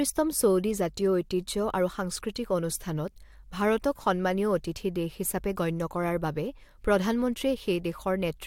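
No technical faults are audible.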